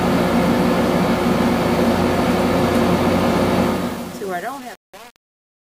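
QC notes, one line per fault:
3.63–5.73 s, truncation distortion on the fade: the fade-out from about 3.63 s is smooth in shape, but it steps down on a coarse grid that fits 8 bits with no dither. From 3.69 s the tail turns gritty, rather than sinking into a steady, even hiss.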